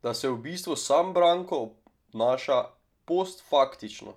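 Speech recording with no technical faults found anywhere in the clip.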